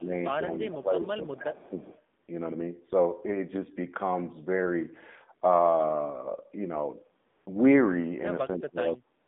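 Throughout, the speech carries an AMR narrowband mobile codec sound. The band runs only from about 200 Hz to 3.7 kHz. The voice is buzzy and synthetic, which fits a low AMR-NB rate near 7.4 kbps. The vocal-tract model leaves the damage plainly audible.

From 0 to 0.12 s the level sags slightly, by roughly 5 dB. From 0.81 to 1.89 s it dips much harder, around 15 dB, for about a second. Later, from 8.56 to 9.04 s, it drops by roughly 20 dB. This is speech suppressed in double talk. The likely cause is an echo canceller ducking the talker while the far side also spoke.

From 1.6 to 1.98 s a faint delayed copy trails the voice. It arrives 305 ms late, sitting about 30 dB below the speech. This is an echo leak. Loudspeaker sound likely slipped past the far end's echo canceller and came back.

At 2.24 to 2.28 s, 7.30 to 7.46 s and 9.24 to 9.27 s the background turns smooth and steady. This is AMR comfort noise. 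The phone stopped sending speech frames for 40, 160 and 45 ms. The receiver filled those gaps with synthetic noise.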